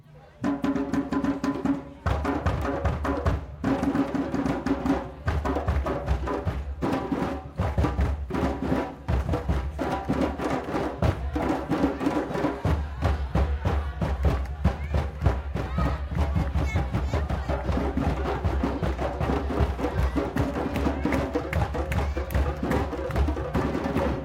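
No technical faults occur at any point in this sound.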